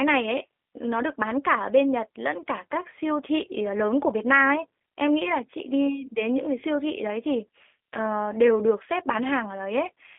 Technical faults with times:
0.00-10.19 G.729 codec

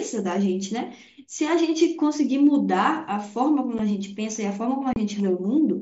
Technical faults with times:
3.78 unconcealed Bluetooth headset packet loss
4.93-4.96 unconcealed Bluetooth headset packet loss

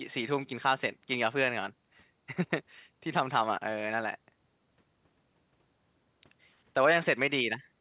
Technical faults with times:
none

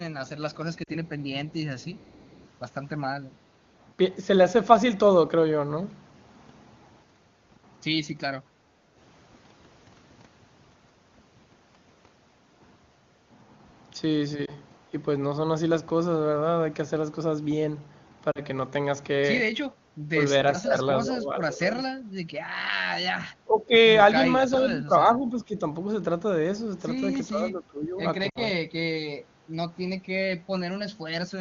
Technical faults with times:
0.26-2.49 echo leak
0.84-0.89 lost AMR speech frames
8.76-8.94 background gated by the echo canceller
14.46-14.53 lost AMR speech frames
18.31-18.40 lost AMR speech frames
20.09-21.76 speech suppressed in double talk
23.45-25.64 speech suppressed in double talk
27.29-28.63 speech suppressed in double talk
28.29-28.38 lost AMR speech frames
29.29-29.48 background gated by the echo canceller

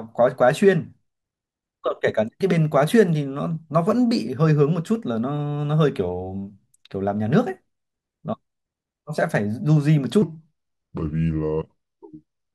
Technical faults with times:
10.22-12.54 section at the wrong speed

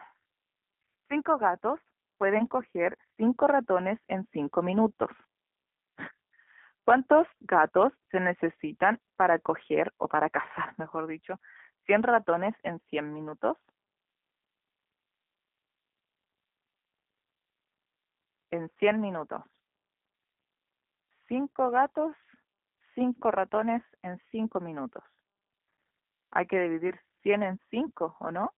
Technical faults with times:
0.00-28.58 G.729 codec

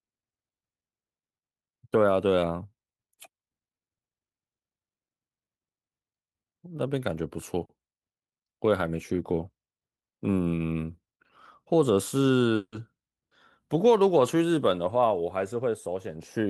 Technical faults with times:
12.55-12.75 call audio freeze
15.37-16.47 jitter buffer speed-up

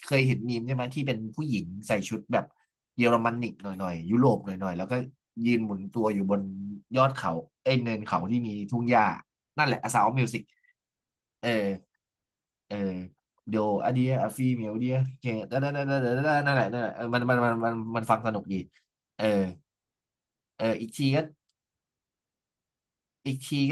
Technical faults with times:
7.67-9.47 channel delay (comb filtering)

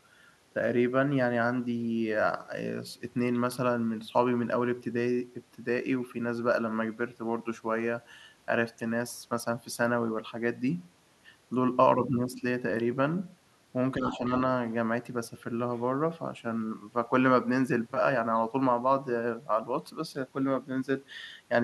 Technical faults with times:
13.97-14.31 speech suppressed in double talk
14.06-14.18 other side's voice leaking through

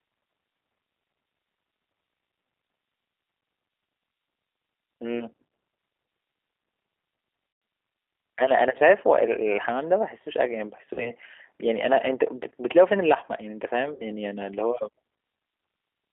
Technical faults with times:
0.00-16.12 G.729 codec
7.53-7.62 VoIP packet loss concealed by the speech codec
10.94-11.11 VoIP packet loss concealed by the speech codec
13.94-14.04 VoIP packet loss concealed by the speech codec

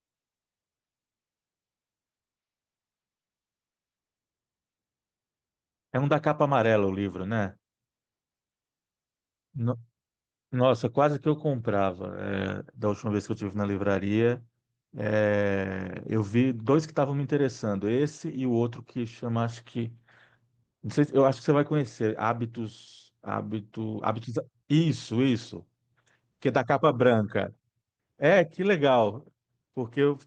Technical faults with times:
none

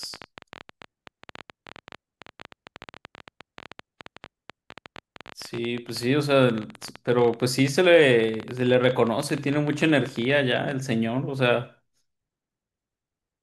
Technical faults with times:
0.03-10.72 train of clicks

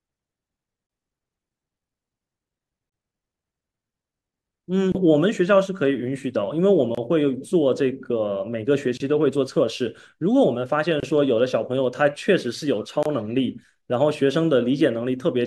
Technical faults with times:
0.87-0.89 gap at a join of encoded pieces
2.89-2.92 gap at a join of encoded pieces
4.92-4.95 gap at a join of encoded pieces
6.95-6.97 gap at a join of encoded pieces
8.97-9.00 gap at a join of encoded pieces
11.00-11.03 gap at a join of encoded pieces
13.03-13.05 gap at a join of encoded pieces

